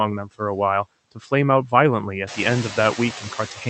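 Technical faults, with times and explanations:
Throughout: noise suppressor artifacts. The suppressor estimates the steady background in each frequency band and pulls those bands down frame by frame, here by about 14 dB. As a result, the background sinks in the pauses and comes back up underneath the speech whenever the talker speaks, so the noise floor pumps with the talker. The effect grows after about 2.5 s, when the room noise rises by about 16 dB and sits only about 13 dB below the speech.
1.12 to 1.32 s: speech cut by the noise suppressor. Within this window the suppressor misclassified part of the speech as background and attenuated it along with the noise, reaching a drop of about 14 dB at its deepest. Only part of the span is affected, roughly a tenth of a second in total, so low-level speech energy such as soft consonants or a word ending comes through faint or swallowed rather than fully missing.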